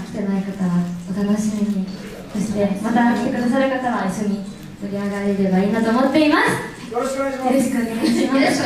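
No technical faults can be heard anywhere in the audio.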